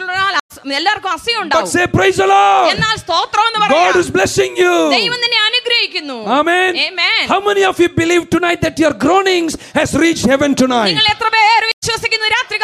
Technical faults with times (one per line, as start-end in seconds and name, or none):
0.40-0.52 stream reconnect
3.35-4.03 drift correction step
8.38-9.64 drift correction step
11.72-11.84 stream reconnect